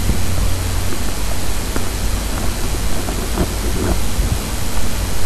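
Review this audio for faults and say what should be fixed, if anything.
Compressed frames skipped at 4.16 s: the decoder dropped a few damaged or missing frames, so the audio jumps ahead about a tenth of a second. To prevent this, verify file integrity after encoding and transfer, and re-encode or re-fetch any stream with corrupt frames.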